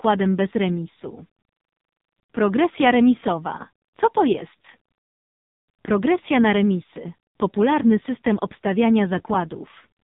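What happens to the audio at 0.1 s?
At 0.1 s, as throughout, the AMR narrowband mobile codec cuts everything above 4 kHz and rebuilds speech from sparse pulses, leaving it heavily buzzy and synthetic.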